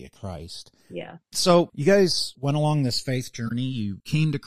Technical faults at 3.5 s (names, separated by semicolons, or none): channels drifting apart; corrupt frame decoded